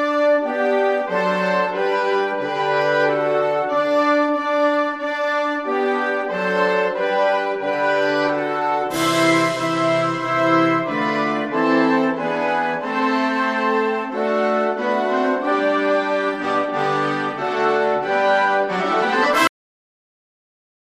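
At 19.47 s the audio just stops mid-sound, a cut-off end. The final stretch of buffers never got written out, so instead of decaying naturally it falls straight into digital silence, which then runs for about 1.4 s to the end.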